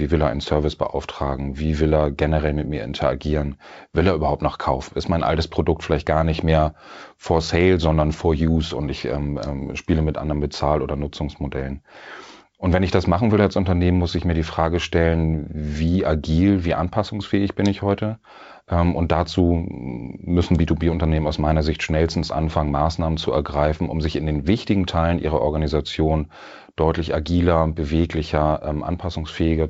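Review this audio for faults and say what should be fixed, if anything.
No faults found; nothing needs fixing.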